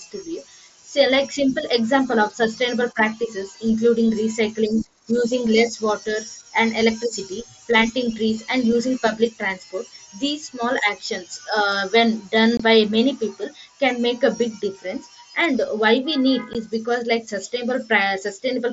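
At 12.57 to 12.60 s there's a short hole of about 22.5 ms, and at 16.53 s another of about 15 ms. Both are unconcealed Bluetooth headset packet loss. Voice packets between headset and phone went missing, and nothing filled the gap, so the speech simply drops out with hard edges. The lengths fit roughly three and two lost frames, each heard through the mSBC wideband link.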